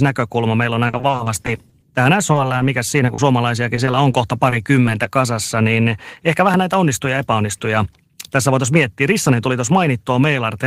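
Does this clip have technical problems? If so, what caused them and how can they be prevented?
Yes. From 0.87 to 1.84 s and again from 3.76 to 5.07 s there is repeated packet loss, giving a choppy, robotic sound. About a dozen short dropouts in the first stretch, and several in the second, were each patched by extending the previous sound, leaving missing fragments. A larger jitter buffer, forward error correction or a more stable network path prevents this.

Short concealed packet loss appears at 2.32 to 2.36 s, 2.58 to 2.62 s, 3.06 to 3.10 s and 3.14 to 3.20 s. Each is a brief smear or wobble where 20 to 40 ms of audio arrived too late and the decoder synthesised a continuation before rejoining the real signal. Reducing network jitter and enabling redundancy prevents it.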